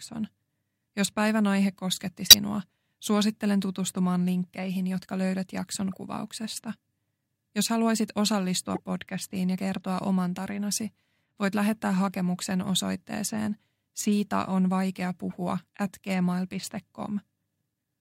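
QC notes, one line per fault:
2.26–2.35 s (after "päivän aihe kosketti"), 5.92–5.97 s (after "linkkeihin jotka löydät jakson"), 8.75–8.80 s (between "haluaisit osallistua" and "podcastiin ja kertoa oman"), 15.30–15.34 s, corrupt frame decoded: short chirp, blip or noise bursts, the first far stronger than the others. Damaged compressed frames were still decoded, so misread values put energy at wrong frequencies for each frame's length.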